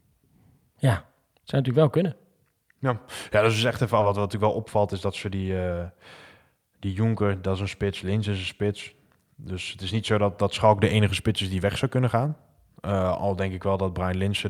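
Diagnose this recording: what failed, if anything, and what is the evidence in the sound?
At 4.00 s, just after "dat is echt even", the speech jumps forward with no gap and the two sides are butted together. This is a skip ahead at the network and jitter-buffer stage: about a third of a second of audio was discarded while later audio was already queued.

From 4.09 to 5.58 s the speech runs hurried, about 108% of normal speed, yet the pitch stays put. This is a jitter buffer speed-up: the receiver trimmed many short pitch-period pieces, roughly 150 ms in total, to drain excess buffered delay.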